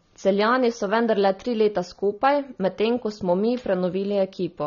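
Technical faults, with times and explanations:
Throughout, AAC compression: nothing reaches above 6.9 kHz, and the speech sounds dull and smeared with a warbling, fizzy edge on sibilants. A spectrogram shows a hard ceiling, likely from AAC-LC at a low rate, around 24 kbps.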